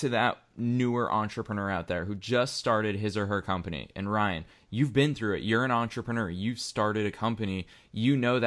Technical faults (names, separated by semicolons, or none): none